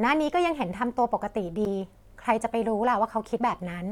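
Compressed frames skipped at 1.65 s in this speech: missing or damaged frames go unplayed, so the audio jumps ahead about 70 ms.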